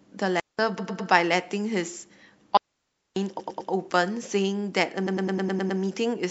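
This speech clip has two digital wireless dropouts, at 0.40 to 0.59 s (about 0.19 s) and 2.57 to 3.16 s (about 0.59 s). In each, the receiver lost too much data and muted with a very brief fade, leaving a clean hole of near silence with no noise burst on either side. On a waveform these look like flat gaps with sharp edges, and on a spectrogram like blank vertical bands. The clip also has repeated frames, heard as a stutter where a short chunk of audio about 0.10 s long plays again and again, which fits a block of four compressed frames being sent or written more than once. This happens at 0.77 to 1.09 s and 3.39 to 3.70 s, each with three extra plays adding about 0.31 s, and at 5.06 to 5.79 s, with seven extra plays adding about 0.73 s. A waveform shows the same shape copied side by side, and a spectrogram shows the same pattern tiled at a 0.10 s spacing.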